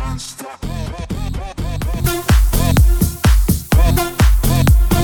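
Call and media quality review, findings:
Sudden gain jump at 2.04 s: sound and noise floor step up together by about 10 dB to the end. Likely a digital gain change applied without ramping.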